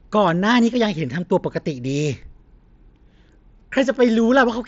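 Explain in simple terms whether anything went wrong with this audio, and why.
Concealed Bluetooth headset packet loss happens at 3.60 s. About 15 ms of sound never reached the phone from the headset, which fits a couple of dropped packets. The phone filled the gap by repeating the best-matching slice of the sound just before.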